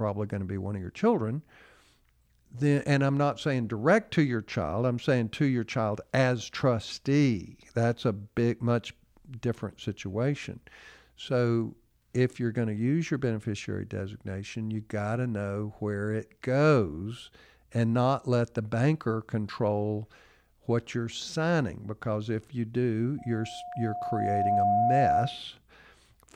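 Loudspeaker feedback squeal from 23.18 to 25.43 s, just after "because if you do": the microphone re-amplifies its own loudspeaker, so a 714 Hz tone swells over roughly a second and a half to about 5 dB above the speech.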